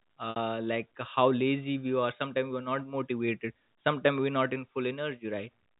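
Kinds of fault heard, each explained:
Packet loss with pitch repetition: a burst of lost packets left a gap of about 60 ms in the speech, from 0.30 to 0.36 s, a length that fits three 20 ms packets. The receiver covered the hole by replaying the last pitch period of the voice and tapering it away, so instead of a dropout there is a brief held, slightly buzzy tone before normal speech resumes. The narrow telephone band of the G.711 coding is audible throughout.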